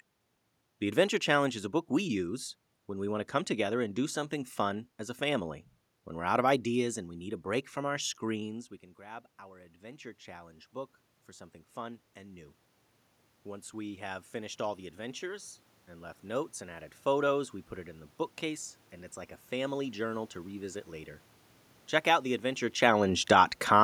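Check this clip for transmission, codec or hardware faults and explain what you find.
One system fault is present, in the level control. From 7.99 s to 16.9 s, just after "a break from our", there is automatic gain rising: the gain control, seeing input about 17 dB quieter after the talker moved away, slowly raised gain about 12 dB, so voice and room noise swell together.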